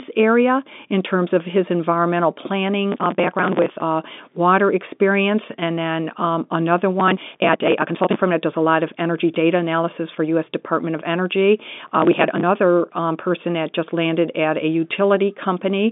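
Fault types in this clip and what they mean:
processor overload crackle: Three bursts of gritty tearing, near 2.9, 7.0 and 11.8 s, lasting 0.65 to 1.2 s, where dozens of short buffers of around 10 ms are skipped outright. Unlike one network dropout, the hard-edged gaps come in rapid runs and stop when the load passes.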